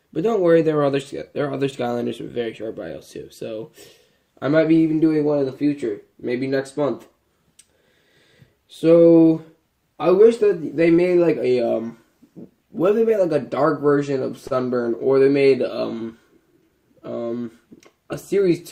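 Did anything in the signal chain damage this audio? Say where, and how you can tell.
Yes: a short stall from a late packet at 14.47 to 14.53 s, which places the damage at the network stage. A packet arrived behind schedule, the receiver's jitter buffer ran dry, and the last sound was stretched for about 35 ms to cover the gap. Nothing is lost; the audio resumes exactly where it paused. What you hear is a brief hold with a faint buzz or dip, and everything after it sits 35 ms later than before.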